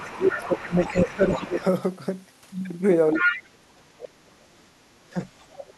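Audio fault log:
0.00–1.64 s, 3.16–4.33 s, 4.74–4.94 s: speech suppressed in double talk. The talker's level sinks while another voice overlaps. The first dip is shallow, about 15 dB. The later two cut far deeper, about 30 to 35 dB. This is likely an echo canceller mistaking both voices for echo.
0.04–0.62 s, 0.81–0.92 s, 1.28–1.51 s, 3.13–3.43 s, 5.38–5.74 s: other side's voice leaking through. A second voice appears in short scraps. It is mostly faint, roughly 10 to 20 dB below the talker. Near 3.1 s it is about as loud. This is likely loudspeaker sound the echo canceller missed.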